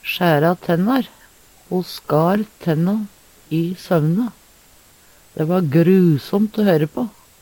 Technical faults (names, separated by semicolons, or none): none